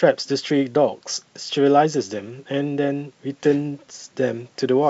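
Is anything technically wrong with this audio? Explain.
No, nothing is wrong; the speech has no content above 8 kHz and carries the usual coding texture, both normal for a wideband call path of the G.722 kind.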